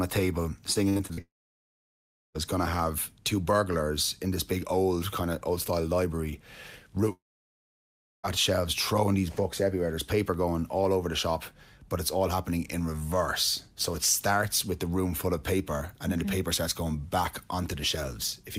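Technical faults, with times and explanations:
0.73–1.19 s, repeated packet loss (robotic sound): after "a table", five short holes, the longest 61 ms, are patched by repeating the last sound, giving choppy, robotic stutters rather than one long silence.
1.21–2.36 s and 7.12–8.25 s, long network dropout: a brief fading tail gives way to about 1.1 s of silence before "going to have two" and "shelves throwing these books"; likely a network outage.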